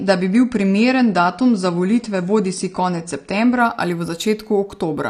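From 0 to 3.6 s the speech plays as an adaptive stream starting at a low bitrate: nothing above 9.8 kHz, with heavier codec artefacts, consistent with roughly 32 kbit/s AAC. At 3.6 s, before "ali v", quality steps up without a gap, which fits a switch to about 96 kbit/s.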